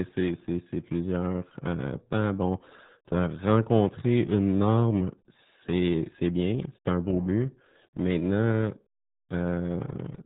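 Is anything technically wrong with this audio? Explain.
Yes. RealAudio 14.4 codec, throughout: this dial-up-era speech coder discards everything above 3.9 kHz and, at what sounds like roughly 8 kbit/s, leaves the speech heavily muffled and gargly.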